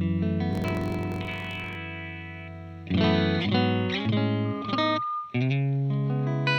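From 0.49 to 1.77 s a buzz near 46 Hz appears and the sound runs about 1.07 times fast at normal pitch: a block size mismatch (truncated), with the ends of 1024-sample blocks discarded. From 4.44 to 5.48 s a 1.2 kHz tone swells within a fraction of a second into loudspeaker feedback squeal, as loud as the sound itself, because the microphone-to-speaker loop exceeds unity gain.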